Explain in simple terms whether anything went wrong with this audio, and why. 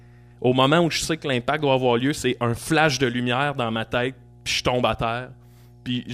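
Something did go wrong: mains hum runs through the whole recording, a steady low 60 Hz tone sitting under the speech from start to finish. It happens when the electrical power supply leaks into the audio, typically through a ground loop or a nearby transformer.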